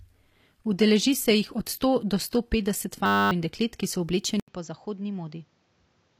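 Adaptive stream starting at a low bitrate, from 0.0 to 4.0 s: the player opened on a cheap version of the stream and upgraded once it had gauged the connection. The treble sounds synthetic and smeared, which fits HE-AAC at 24 kbit/s. At 4.0 s it snaps, without a gap, to a fuller sound consistent with 96 kbit/s AAC-LC, reaching up to 15 kHz.

A system hang loop runs from 3.06 to 3.31 s. The system froze while the sound hardware kept replaying one 10 ms slice of its buffer, about 25 times over. This produces a steady 100 Hz buzz in place of the sound, and roughly a third of a second of real audio is lost.

At 4.40 s, 80 ms of silence is followed by a duller, boxier sound with nothing above 7.6 kHz. The level drops by about 10 dB, and new background noise sits about 35 dB beneath the signal until the end. The likely cause is the input switched to a poorer device.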